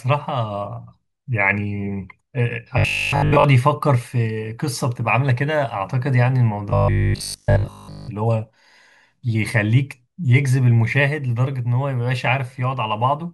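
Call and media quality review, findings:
Robotic sound from repeated short buffers, 2.78–3.44 s and 6.70–8.10 s: rigid 50 Hz buzz, likely 20 ms buffer repeats; spectrogram shows 50 Hz harmonic comb, waveform repeating cycles.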